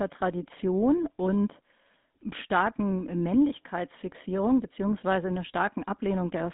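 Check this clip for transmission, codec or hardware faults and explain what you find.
One codec fault runs through the whole clip. Throughout, GSM full-rate coding models the vocal tract with coarse pulse excitation, leaving speech buzzy and gravelly, consistent with roughly 13 kbps, band-limited to about 200 Hz to 3.6 kHz, with nothing above 3.8 kHz.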